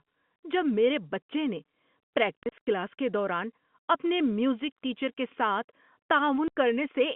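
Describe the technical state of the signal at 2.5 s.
Packet loss filled with silence runs from 2.43 to 2.67 s, just before "کلاس کے دوران اپنے". Lost audio, about 120 ms scattered across 240 ms with no single gap over 30 ms, is replaced by silence, chopping the sound with hard edges. The waveform drops abruptly to near silence and the spectrogram shows narrow blank vertical stripes.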